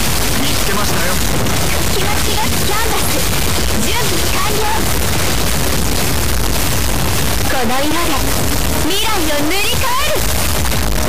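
Throughout, integer read as float: the samples, apparently stored as 32-bit integers, are being decoded as 32-bit floats, so most values land near zero or far past full scale. The result is a harsh, extremely loud square-wave buzz slamming between silence and clipping.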